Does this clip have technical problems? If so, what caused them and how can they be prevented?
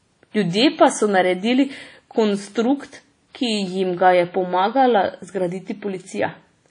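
Yes: throughout the speech, washy ringing and signal-following hiss with nothing above 10.1 kHz point to WMA compression at a low bitrate, likely around 32 kbps. Unlike a plain low-pass filter, its smeared pre-echo breathes with the signal. Encode at a higher bitrate or keep a lossless master.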